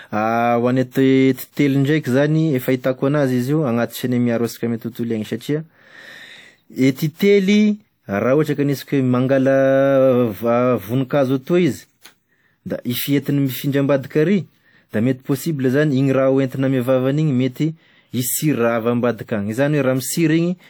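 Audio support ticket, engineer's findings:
Short hiss ahead of attacks in the speech, onsets sounding soft and smeared. Pre-echo at 0.91 to 0.95 s (38 ms), 6.95 to 6.98 s (28 ms) and 7.14 to 7.19 s (58 ms). Probable component: transform codec in the encode path. The attack lands late in a coding block, so quantisation noise sized for the loud onset is spread back across the quiet stretch before it.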